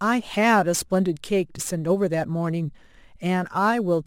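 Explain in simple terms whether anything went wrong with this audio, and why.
A gritty fizz rides along with the speech from start to finish, growing stronger on louder and brighter sounds like hissy consonants. It comes from crude rate conversion: the audio was switched to a slightly faster sample rate by simply repeating nearby samples instead of smoothing them properly. Those repeats follow a regular pattern, which creates stray tones unrelated to the speech. The pattern fits a change from 44.1 kHz to 48 kHz.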